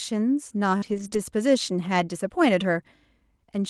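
At 0.77 to 0.84 s, about 40 ms of audio failed to arrive in time, a short concealed packet loss. The receiver extended the preceding sound to bridge the hole and then blended back, which leaves a brief smear in the speech. A second, shorter concealed loss of about 20 ms at 1.10 to 1.13 s leaves a quicker wobble.

Overlapping and following these, from 0.82 to 1.08 s and again at 1.13 to 1.19 s, several lost packets were each rebuilt from error correction. The next packet carried a low-bitrate copy, so nothing drops out, but about 140 ms and 40 ms of speech come through rougher and noisier than the Opus call path around them, whose top end stops near 12 kHz.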